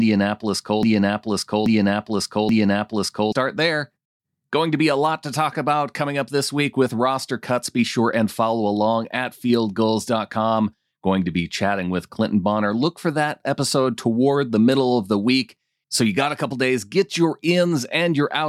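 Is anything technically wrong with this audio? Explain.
Yes. The speech opens with a broken-record loop. It is already under way when the clip starts and runs to about 3.32 s. A fragment of about 0.83 s plays, then plays again identically, three times back to back. The likely cause is a stall in the player, encoder or stream, which kept resending the last chunk it held. The result is a stuttering, mechanical repeat, and whatever speech belonged in those seconds is missing.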